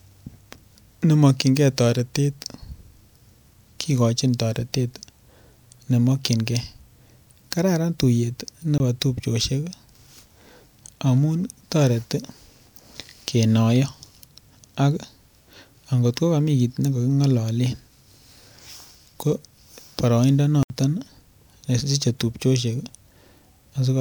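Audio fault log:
8.78–8.80 s and 20.63–20.70 s: block of digital silence. The audio drops to silence for 20 ms, then about 71 ms, with no fade. The first gap is a short hole. The longer second one is a brief hole.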